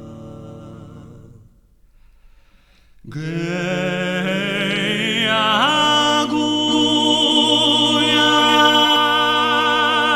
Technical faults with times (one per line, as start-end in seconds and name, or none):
6.68-8.96 doubled audio track